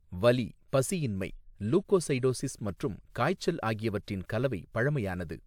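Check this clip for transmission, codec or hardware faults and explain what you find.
No transmission, codec or hardware faults are audible anywhere in the speech.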